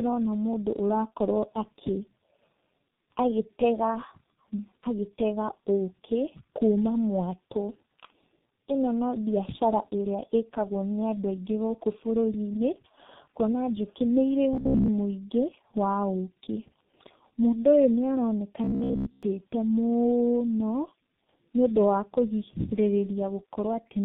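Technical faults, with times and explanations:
Throughout, tandem speech coding: the speech passed through two speech codecs in a row, AMR-NB at 7.4 kbit/s and then G.723.1 at 6.3 kbit/s, with a G.711 A-law link between them. Each low-rate coder had to re-encode whatever the one before it had already smeared, so the losses stack. You get that rough, muffled, warbly quality.
14.53 to 14.89 s and 18.64 to 19.23 s, robotic sound from repeated short buffers: in both stretches the speech collapses into a rigid metallic buzz at 66.7 Hz. That still follows the rough contour of the speech. The likely cause is late-arriving audio being papered over by looping the last chunk, around 15 ms long, which fits the buzz frequency. Roughly two-thirds or more of each stretch is repeats rather than real signal.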